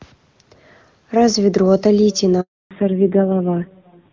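Echo with no canceller runs through this whole speech recording: a thinner copy of the talker trails every phrase by roughly 0.4 s at about 26 dB below the direct sound, because the far end's loudspeaker feeds back into its microphone and nothing strips it out before it returns over the network. A handover gap follows from 2.41 to 2.71 s, where the audio dies away and leaves 300 ms of silence while the call switches networks and no speech frames get through, so whatever was said then is lost. Fallback to narrowband begins at 2.71 s and lasts to the end. Everything above 4 kHz disappears and the voice turns duller and rougher. That points to the call leaving the clean HD Voice wideband coding heard before the gap for a low-rate narrowband codec.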